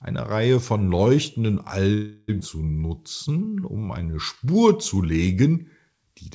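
Call audio freeze, 1.94 to 2.30 s: the sound stalls and the last fragment is stretched into a fading buzz for about 0.34 s, then resumes where it stopped. This is likely packets held up in transit while the jitter buffer ran dry, so a gap was inserted and nothing lost.

Skip ahead, 2.40 to 2.43 s: playback jumps forward almost seamlessly, dropping roughly a fifth of a second of speech. That stretch was dropped, in transit or by the overflowing jitter buffer, while later audio was already waiting, and the two sides are butted together.

Jitter buffer slow-down, 2.81 to 4.95 s: the buffer, running low or having just raised its target delay, rebuilt its reserve by repeating single pitch periods and bits of pauses, adding 0.24 s. Speech plays at about 89% speed with unchanged pitch and sounds drawn out. Throughout, the G.722 call path keeps everything below 8 kHz.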